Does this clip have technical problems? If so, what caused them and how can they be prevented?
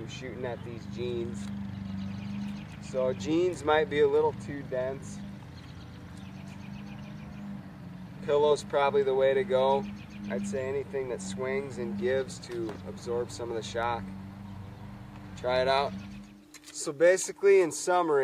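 No, there are no technical faults.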